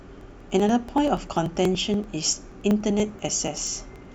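From 0.12 s to 4.05 s the speech carries a steady train of ticks, one every 0.096 s, around 40 in all. These are periodic USB or driver dropouts: the audio path stalls at a fixed interval, and a few milliseconds of audio are skipped each time, splicing the sound abruptly.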